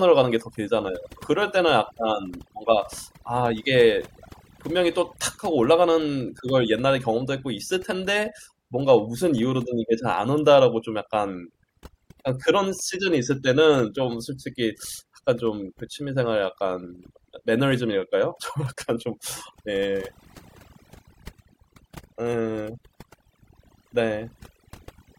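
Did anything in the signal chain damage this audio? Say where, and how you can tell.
Yes. Throughout the speech, the background drops to near silence speckled with twinkling artefacts. That is overdone noise removal at the processing stage: a suppressor set too aggressively shuts off individual bands near its noise estimate, taking quiet voice detail with them.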